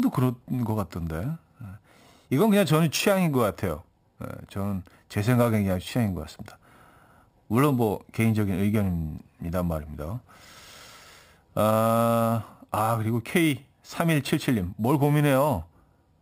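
Throughout the speech, imaging from sample-and-hold upsampling of a likely 12 kHz source adds metallic fizz at 6–12 kHz, about 20 dB down. Unlike hiss, it tracks loudness and moves opposite to pitch.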